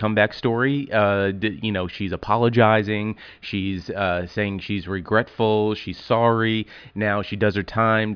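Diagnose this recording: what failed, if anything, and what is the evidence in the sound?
Nothing in the recording points to a failure at any stage of the chain, and the speech signal holds steady and continuous throughout, with no audible breaks, distortion or level disturbances.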